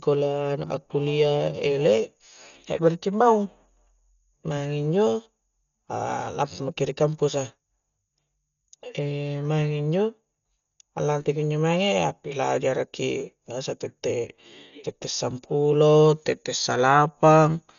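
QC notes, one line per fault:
Throughout, Dolby Digital compression: likely a heavily starved encode near 48 kbps, leaving nothing above 7 kHz and dither-filled gaps, so speech sounds dull with rough fluttering noise.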